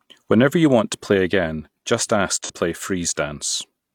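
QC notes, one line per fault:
2.44–2.52 s, AAC frame loss with concealment: right after "play again just ask", about 43 ms goes smeared and phasey, which fits a single lost frame patched from the previous spectrum.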